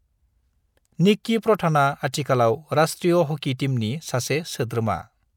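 No technical faults can be heard anywhere in this recording.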